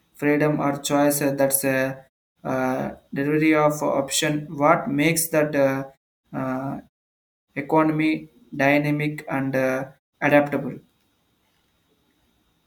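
No faults found in the speech; the background falls to silence in the pauses and returns in time for the next sound, with only very quiet sound lost.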